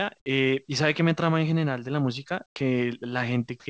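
From 2.46 to 2.56 s, the quiet background, about 49 dB below the loudest speech, turns into a flat, featureless hiss for 100 ms, with the level shifting by about 7 dB. This is likely comfort noise in place of the background: the sender paused transmission and the receiver synthesised noise.

From 3.60 to 3.66 s, the sound at the tail of the clip gives way to steady noise for 60 ms, losing about 50 ms of speech. The likely cause is sound dropped by the voice detector: it judged that stretch to be background and stopped sending, and the receiver filled the gap with comfort noise. Throughout the clip nothing is heard above 8 kHz, which fits the G.722 call codec.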